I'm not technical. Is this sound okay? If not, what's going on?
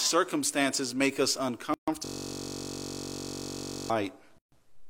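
No. There are two kinds of problem in this speech.

A gap at a join of encoded pieces appears at 1.74 to 1.88 s, right after "make us", and again at 4.38 to 4.52 s. Each is a sudden silence of about 140 ms. The audio was saved in separate sections and stuck together, and each join kept the short stretch of blank padding the encoder adds.

A system hang loop runs from 2.05 to 3.90 s. The computer froze, and the sound hardware kept replaying the same 21.33 ms scrap of audio, which fits a 1024-sample buffer. It repeats about 87 times, giving a steady buzz at roughly 47 times per second instead of speech.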